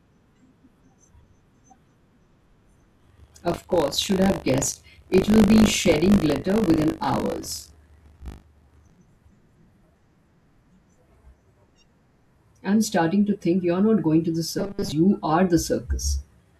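Speech, with buffer tearing from 2.98 to 8.98 s: a steady 50 Hz rattle where a small slice of each 20 ms period replays audio about 40 ms old. After "not going to the", 14.59 to 14.92 s turns into a rigid 200 Hz metallic buzz, the robotic sound likely from repeating 5 ms buffers over most of the audio.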